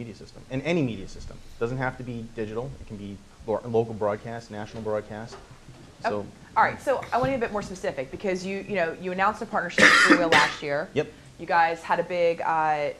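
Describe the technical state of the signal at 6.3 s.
At 6.3 s the signal is intact, with no dropout, distortion, glitch or other fault audible at that moment.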